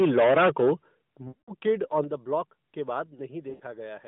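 From 0.00 to 0.73 s the loudest syllables have a harsh, crackling, flattened edge, with a large share of the waveform squared off. This is microphone overload: the input was likely driven about 13 dB past the converter's ceiling, so the peaks were sliced off. At 1.02 s the voice and the background drop together in one sudden step of about 10 dB. That is the microphone volume stepping down, most likely the call software cutting the input gain in reaction to the clipping just before.

From 1.28 to 1.51 s the sound stretches into a smeared, held tone and fades away over roughly 200 ms. Then it returns thin and rough. These are lost AMR speech frames. The decoder kept repeating the last good pitch and vocal tract settings at falling gain, which fits about ten consecutive 20 ms frames failing.

From 1.68 to 1.99 s a milder rasp returns on the peaks. This is microphone overload again, likely about 2 dB over the limit, with only a small fraction of the samples cut. 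The level then steps down twice more: by about 6 dB at 2.04 s and by about 4 dB at 3.06 s, right after "ब्लॉक के". Both are further likely automatic cuts to the input volume.

From 3.50 to 3.63 s there is a shorter drawn-out fade of about 100 ms from another run of lost frames, roughly five. Throughout, the audio is confined to about 150 Hz to 3.6 kHz, with the light buzz of the AMR narrowband mobile codec at a rate that fits its 12.2 kbps mode.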